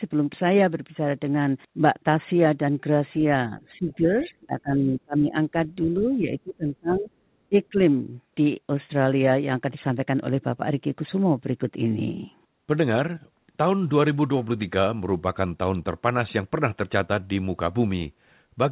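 From 3.58 to 4.08 s the speech dips by roughly 10 dB. That's speech suppressed in double talk, likely the echo canceller ducking the talker while both sides spoke. It happens again, harder, from 4.24 to 5.35 s (about 20 dB), from 5.87 to 7.1 s (about 25 dB) and from 7.49 to 7.78 s (about 20 dB). Around those same windows, faint scraps of the other side's voice leak through at 3.89 to 3.95 s and 4.23 to 4.27 s. They sit around 30 dB under the talker, brief, likely loudspeaker echo the canceller didn't fully remove.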